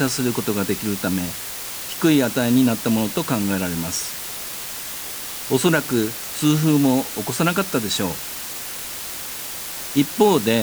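From start to finish the speech carries low bit depth with dither: the signal is held to about 5 bits, and noise was mixed in before each sample was rounded, so the rounding error spreads into a steady white hiss rather than gritty distortion. That hiss sits only around 10 dB below the speech, constant and even. A spectrogram shows a flat noise floor filling every frequency band between and beneath the speech; the waveform looks thickened by fuzz even in pauses.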